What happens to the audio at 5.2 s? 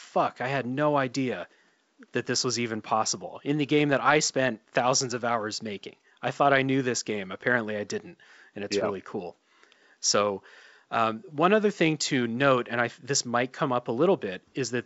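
At 5.2 s the audio is intact, with nothing beyond the faint room noise and the steady, band-limited sound of G.722 wideband telephone coding that run through the whole clip.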